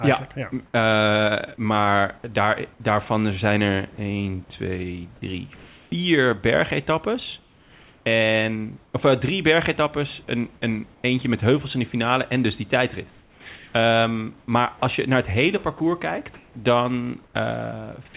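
Comfort noise in place of the background appears at 0.66 to 0.74 s and again at 5.56 to 5.92 s. The room hiss turns into a smooth, featureless noise, about 10 dB quieter in the first case and level-matched in the second. This likely happens because the sender's voice detector stopped transmitting during the pause, so the receiver synthesised a noise shaped only roughly like the real background.

Sound dropped by the voice detector follows at 2.18 to 2.24 s and at 3.96 to 3.98 s. About 30 ms and 20 ms of speech respectively give way to steady noise. The detector likely mistook quiet sound for background and cut transmission early.

The same comfort-noise substitution, likely from discontinuous transmission, returns across 7.4 to 8.94 s, where about 0.74 s of background is synthetic. It recurs at 10.94 to 11.04 s, about 6 dB down from the real room noise it replaces.

Sound chopped by the voice detector runs from 13.1 to 14.82 s and from 15.78 to 17.34 s. 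The audio turns choppy. Roughly 0.66 s and 0.34 s are filled in. The detector likely toggled on and off repeatedly, replacing parts of the sound with comfort noise. Throughout, nothing is heard above 4 kHz, which fits a G.711 narrowband call path.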